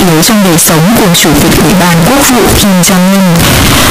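Speech runs the whole way through with the float read as integer fault: the waveform sits as a near-square block at an almost fixed, high level, very loud and harsh, with background noise as strong as the speech, though pitch stays traceable. That points to 32-bit float samples likely being read as 32-bit integers, so sign and exponent bits set the level.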